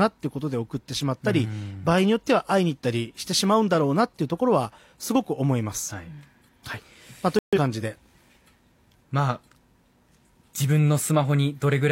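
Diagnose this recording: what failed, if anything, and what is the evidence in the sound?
The speech cuts abruptly to silence from 7.39 to 7.59 s, then resumes on time: a corrupt frame muted at the codec decoder, with rejected frames replaced by silence.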